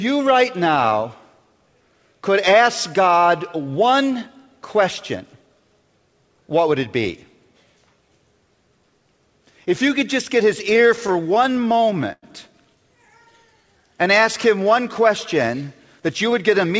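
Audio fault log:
10.70–12.24 s, repeated stalls (stutter): the jitter buffer ran dry 15 times in this span, the longest wait about 100 ms. The receiver stretched the last sound to bridge each gap, adding roughly 0.24 s in total, about 15% of the span, so the audio drags and stutters with nothing lost.
13.07–13.79 s, jitter buffer slow-down: to rebuild its reserve the receiver repeated single pitch periods and short stretches of pause, adding about 77 ms. Playback runs at roughly 90% speed while the pitch holds steady, so sounds come out drawn out.
15.99–16.72 s, jitter buffer speed-up: with too much audio queued, the receiver cut out short pieces of one or a few pitch periods, about 50 ms in all. The audio runs at about 106% speed at unchanged pitch and sounds hurried. The call path's G.722 coding leaves nothing above 8 kHz.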